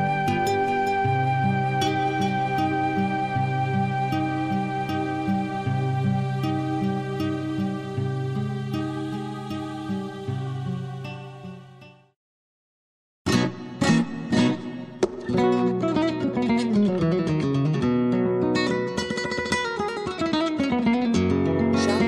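The clip is a piece of audio with nothing technically wrong with it.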